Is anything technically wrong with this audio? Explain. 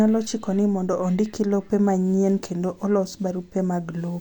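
No, nothing is technically wrong with this audio.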